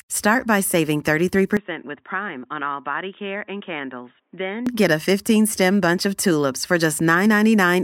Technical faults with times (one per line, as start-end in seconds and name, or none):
1.57-4.67 input switched to a poorer device